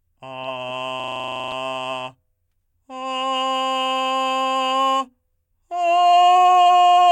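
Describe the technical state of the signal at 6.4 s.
At 6.4 s the music plays through cleanly, with no dropout, distortion, glitch or other fault audible in the signal at that moment.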